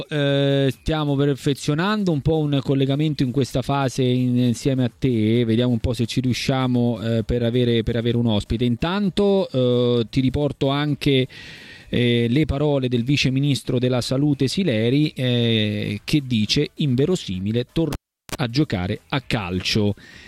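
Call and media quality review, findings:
Cable pulled and plugged in, 17.93 to 18.35 s: pop, about 375 ms near-silence, 35 ms of 60 Hz mains buzz as the tip touches, second pop on reconnect. Live jack/connector. Waveform shows spike, flat gap, dense buzz, spike. Spectrogram shows broadband lines around a dark gap and stacked 60 Hz harmonics.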